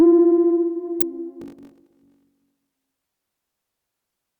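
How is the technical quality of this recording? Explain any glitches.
The recording has two distinct glitches, one brief and one sustained.

At 1.01 s there is an electrical switching spike: a sharp snap, likely from a nearby switch arcing onto the line, visible as a thin vertical spike in the waveform.

From 1.40 to 2.72 s a block size mismatch (padded) zero-fills each block. That fits 1024-sample reads, producing a 46.9 Hz buzz, regular gaps in the waveform, and playback at 0.861 speed with unchanged timbre.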